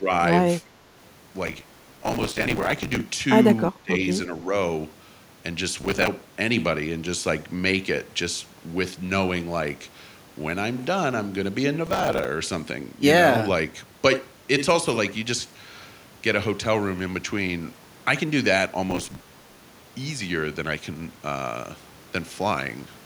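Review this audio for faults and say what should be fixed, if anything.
Speech suppressed in double talk is the likely cause of two level dips: about 10 dB at 0.0–0.1 s and about 20 dB at 3.72–3.94 s. An echo canceller that mistakes overlapping talk for its own echo turns the speech down. Unlike a network dropout, the speech is attenuated rather than cut to silence, and the dips are brief. To prevent it, improve the canceller's double-talk detection and reduce loudspeaker-to-microphone coupling so it does not need to suppress so hard.

Processor overload crackle occurs at 1.47–3.01 s, 5.81–6.08 s, 11.87–12.25 s and 18.91–19.63 s. In these spans a gritty, tearing crackle rides on the speech. Each time the processor misses a deadline, a fragment of old audio is replayed with hard edges. The grain points to buffers of around 5 ms. Unlike clipping, the crackle does not follow loudness, and it stops when the load clears. 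To prevent it, reduce the processing load or enlarge the audio buffer so every deadline is met.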